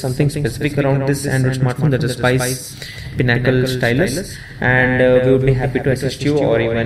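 The audio carries a doubled audio track from start to finish: a second full-band copy of the same material trails the original by roughly 150 ms, sitting about 5 dB lower. That spacing produces a distinct slapback on every onset rather than a smear, and the trailing copy has no decay tail or room colouring, so it reads as a duplicate signal, not reverb. The likely cause is the source being captured twice, once through a slower path, or an edit that leaves two misaligned copies summed together.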